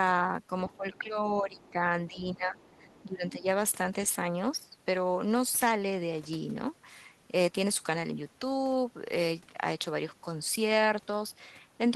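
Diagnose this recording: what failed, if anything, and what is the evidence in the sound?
The talker's speech gets pushed down in four bursts, at 0.67 to 1.19 s, 1.4 to 1.81 s, 2.09 to 2.72 s and 3.05 to 3.47 s, dipping by roughly 15 dB at the deepest. That's speech suppressed in double talk. It's likely a call-processing problem: the echo canceller couldn't separate the near talker from the far side playing at the same time, so it ducked everything to be safe.

Overlapping those stretches there's faint other-side voice leaking through, at 0.69 to 0.76 s, 0.95 to 1.02 s, 1.58 to 1.72 s, and a longer piece from 2.58 to 3.05 s. It sits well under the talker, about 30 dB down. It's likely the same echo canceller letting some loudspeaker pickup past the mic path. That points to call processing again, not the codec or the network.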